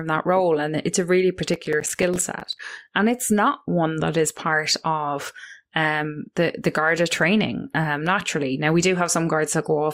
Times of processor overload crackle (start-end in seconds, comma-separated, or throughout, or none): 1.54-2.59